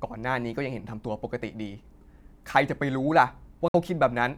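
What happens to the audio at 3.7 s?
At 3.68 s the sound cuts out and stays silent until 3.74 s, a hole of about 58 ms. The speech then resumes mid-flow, skipped ahead as if it had kept playing through the gap. This is a Bluetooth dropout, likely caused by audio packets arriving too late at the headphones and being discarded. The output goes silent until good packets return. A gap this long fits about four lost packets.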